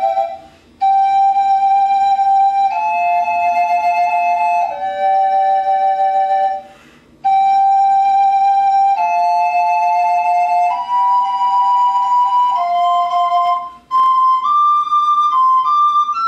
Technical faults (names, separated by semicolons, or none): processor overload crackle